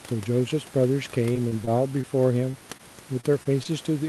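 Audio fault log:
1.33–2.05 s, repeated packet loss (robotic sound): four quick dropouts, the longest about 24 ms, each patched by extending the previous sound, so this stretch turns choppy.
2.51, 2.77, 3.21, 3.43 and 3.63 s, short concealed packet loss: roughly 20 ms missing each time, filled by continuing the sound just before, leaving small smears or wobbles.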